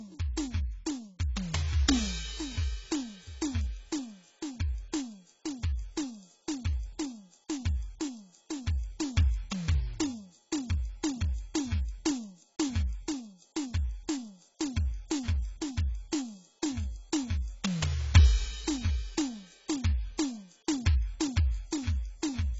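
AAC compression, likely, runs through the whole music clip: nothing sounds above 7.7 kHz, and heavy quantisation of each frame's spectrum leaves smeared detail, which fits a very low bitrate near 16 kbps. Sustained tones warble and the sound turns dull and fizzy.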